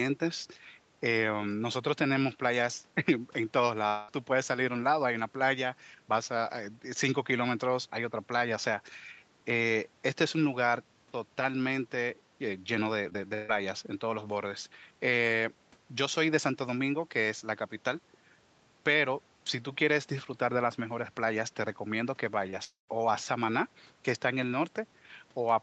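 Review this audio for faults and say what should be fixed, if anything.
A long network dropout, likely a stalled connection, left about 200 ms unplayed at 3.87 to 4.10 s and about 240 ms at 22.64 to 22.90 s. The first hole is bridged by a fading continuation of the last sound. The second fades to roughly 140 ms of silence.

Repeated packet loss (robotic sound) occurs at 13.10 to 13.50 s, with four holes of up to 142 ms that cover nearly half that stretch. The patched gaps make the sound choppy.

Short concealed packet loss at 22.50 to 22.54 s lost about 20 ms, which the decoder filled with extrapolated sound, leaving a brief smear just before the second dropout.

To prevent these, stabilise the network link and use a larger adaptive jitter buffer with Opus in-band FEC enabled.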